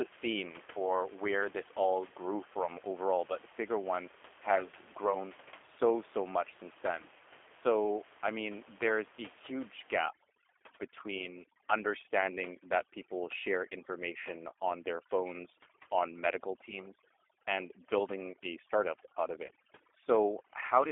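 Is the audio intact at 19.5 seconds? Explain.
No. From 19.46 to 19.51 s there is VoIP packet loss concealed by the speech codec. About 30 ms of audio is missing, consistent with three lost 10 ms frames. The decoder extrapolates the last pitch and filter with falling gain, giving a short buzzy or noisy, fading smear. The underlying G.729 codec is also audible here: band-limited to about 300 Hz–3.4 kHz at 8 kbit/s, with rough, synthetic texture.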